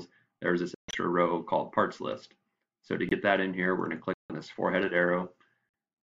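Corrupt frame muted at 0.75–0.95, 3.09–3.13, 4.14–4.32 and 5.69–5.74 s: rejected damaged compressed frames replaced by silence, leaving abrupt holes while timing holds.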